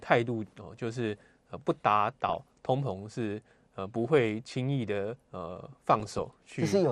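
Throughout the speech, MP2 compression is the likely cause of the plainly audible codec damage. MPEG Layer II divides the signal into 32 equal sub-bands and shares out bits among them, and at a rate that sounds like about 80 kbps there are too few to go round. Upper bands drop out and flicker back while the remaining ones are coarsely quantised, so the speech comes across dull, with a gurgling, granular texture.

From 2.29 to 2.66 s, and again from 5.51 to 6.36 s, DAB burbling appears. Bit errors, at a rate of a few tenths of a percent, slip past the error correction into the MP2 data. Corrupted samples or scale factors make individual sub-bands blip with noise or jump in level for up to a frame. Each stretch is heard as a burbling disturbance over the speech. The second stretch lasts more than twice as long as the first.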